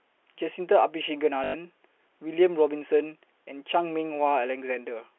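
From 1.44 to 1.54 s, packet loss with last packet repeated fills a 100 ms gap, which fits five 20 ms packets, producing a 50 Hz robotic stutter visible as repeating waveform blocks and vertical spectrogram stripes against the telephone-band G.711 speech.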